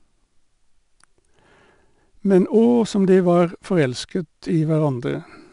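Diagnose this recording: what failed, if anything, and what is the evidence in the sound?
The codec stage failed: 4-bit ADPCM compression runs through the whole speech clip. A gritty hiss rides on every loud syllable and rises and falls with the level. Nothing is heard above 10.6 kHz, which points to a reduced sample rate and roughly 89 kbps. Each sample keeps only a coarse 4-bit step from a prediction, so the error becomes level-following noise.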